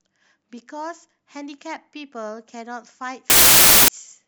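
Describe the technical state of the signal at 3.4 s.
At 3.4 s the signal is inside a wrong sample width fault running from 3.30 to 3.88 s. Audio stored as packed 24-bit integers is being read as 32-bit integers, so each value is assembled from bytes straddling two real samples. Only some values keep the true high-order bits, so loud broadband noise dominates, with the speech faintly buried beneath it, running about 1.33 times too fast and high in pitch.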